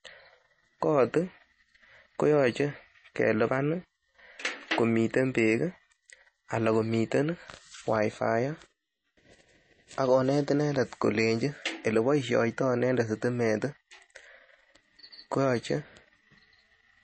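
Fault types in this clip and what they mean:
MP3 compression: The speech was likely squeezed through an MP3 encoder starved of bits, at a rate pointing to roughly 32 kbps. To save data it discarded the treble outright, leaving nothing above about 8.3 kHz, so s sounds lose their crisp top and the speech sounds dulled. It also dropped quiet frequency detail that flickers in and out between frames, giving plainly audible watery, swirling damage across the whole clip.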